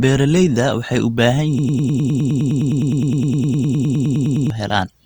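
Speech, and at 1.59 s it catches in a broken-record loop: a roughly 103 ms slice repeats back to back, 28 times, until 4.50 s. Whatever should have played there is gone, most likely because the player or stream stalled and kept resending its last fragment.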